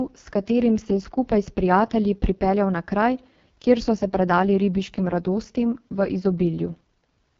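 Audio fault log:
throughout: AMR wideband (HD Voice) codec, heavy damage; coarse pulse coding makes speech raspy, fitting the 6.6 kbit/s mode; spectrogram shows smeared noise above 6.4 kHz, empty above 7.5 kHz.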